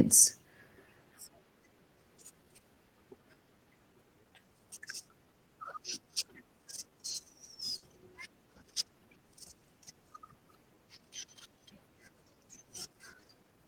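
A speech recording carries clock drift between sender and receiver: the sender's clock runs about 4% slow, so the jitter buffer keeps draining, and on a waveform small irregular seams recur throughout. From 0.86 to 13.48 s come repeated timing corrections, short repeated slivers that slow delivery to 97% speed and add roughly 0.4 s overall, visible as duplicated spectrogram fragments at uneven spacing. At 7.77 to 7.84 s a short stall from a late packet stretches the last sound for 50 ms with nothing lost, showing as a flat, smeared band with a slight dip.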